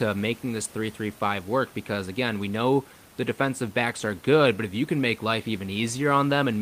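No technical faults can be heard anywhere in the speech. Room noise sits underneath, about 28 dB below the speech, as part of the recording.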